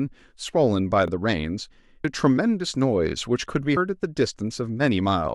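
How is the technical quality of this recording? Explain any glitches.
Not clean: three glitches in the speech, all short.

At 1.08 to 1.10 s there's an overlapping chunks fault. A new chunk started about 25 ms before the previous one ended, so that sliver plays twice. It comes out as a quick stutter, a little hiccup right at the join.

At 2.04 s and again at 3.76 s you get compressed frames skipped. The audio jumps ahead by about 200 ms, which fits roughly seven lost frames of 26.1 ms each.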